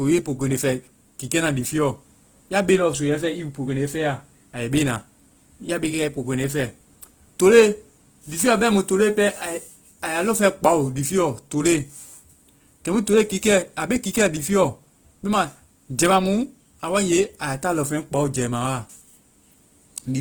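Throughout the speech, the sound is plainly grainy and rough, most likely from Opus compression running in its CELT music mode at a low rate, which fits about 16 kbps. With too few bits, the encoder keeps each band's energy but refills the detail with folded or noise-like content. That is why it turns hissy and coarse rather than swirling or leaving watery gaps as MP3 does. The bandwidth stays full, reaching about 20.1 kHz, so it does not sound muffled.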